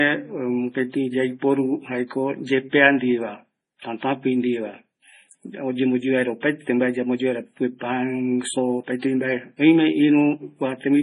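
MP3 compression artefacts run through this speech recording from start to finish, and heavy lossy coding is the likely cause. Nothing remains above 10.5 kHz, where the encoder has cut the treble outright, and the weaker frequency components flicker in and out between frames, giving the voice a watery, swirling quality with chirpy s sounds and smeared onsets. Damage this severe points to a very low bitrate, on the order of 24 kbps.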